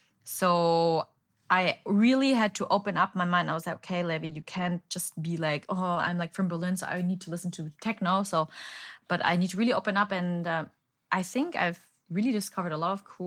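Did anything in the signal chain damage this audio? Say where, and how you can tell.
Yes. Short concealed packet loss at the network stage occurs at 4.25 to 4.31 s, just after "I was like okay", and at 4.41 to 4.45 s. About 40 ms and 20 ms went missing; the decoder extended the preceding sound and blended back, leaving brief smears or wobbles.

Lost packets rebuilt from error correction occur at 4.29 to 4.39 s, at 4.45 to 4.67 s just before "just be like oh", and at 5.95 to 6.09 s between "just be like oh" and "like from". Low-bitrate copies in following packets filled these stretches without gaps, so they sound rougher and noisier.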